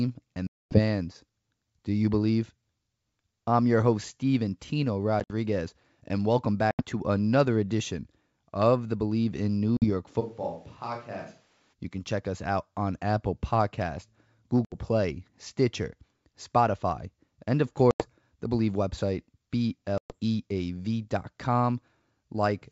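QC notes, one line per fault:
0.47 to 20.15 s, packet loss on an ADPCM call at 0.47, 5.2, 6.71, 9.77, 14.65, 17.91 and 19.98 s: hard silent gaps of 50 to 240 ms, each followed by slightly distorted speech while the decoder's predictor regains step with the sender.
10.22 to 11.72 s, switch to a distant microphone: sound abruptly turns hollow and roomy, about 10 dB quieter, with room noise about 30 dB below it. Likely the close microphone dropped out.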